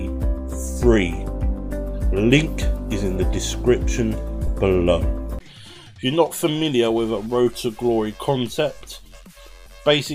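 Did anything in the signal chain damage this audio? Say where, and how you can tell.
Yes, at the Bluetooth link and codec stage. At 4.47 s there's a brief blip of lost LE Audio frames: about 10 ms where the sound turns into a noisy smear instead of staying clean, which points to a single dropped LC3 frame. When a packet goes missing, the decoder fills the gap by reusing the previous frame's spectrum with randomised signs. Tonal detail survives only as noise-like texture, and the gap is too short for any fade-out.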